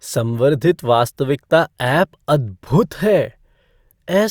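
No technical faults are audible.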